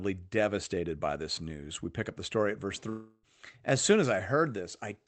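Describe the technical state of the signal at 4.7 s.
At 4.7 s the speech is intact, with no dropout, glitch or other fault, only the band-limited sound of the call path carrying it.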